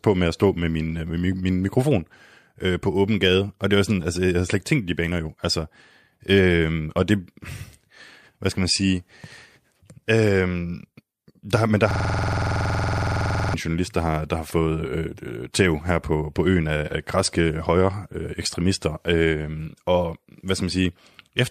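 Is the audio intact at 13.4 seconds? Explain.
No. At 13.4 seconds the audio is caught in a system hang loop that runs from 11.91 to 13.54 s. It begins right after "der men der" and releases just before "journalist der har der". The computer or driver stalled while the sound hardware kept replaying its ring buffer. One 46.44 ms piece repeats exactly, 35 times. That gives a rapid, mechanical repetition at 21.5 Hz, which fits a 2048-sample buffer.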